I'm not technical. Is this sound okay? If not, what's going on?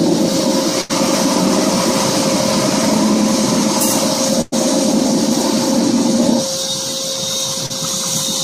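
No. A burst of packet loss hits at 0.81 to 0.91 s and 4.41 to 4.54 s. Chunks of sound arrived too late, so the last sound was stretched and faded, then about a tenth of a second is skipped. Short concealed packet loss at 7.66 to 7.72 s leaves a brief smear or wobble where a few hundredths of a second were patched over.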